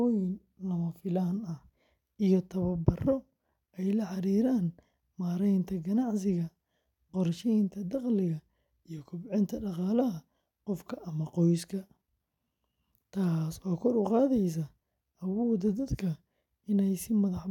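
Nothing technical stands out in this speech recording; there's no fault here to point to at any moment.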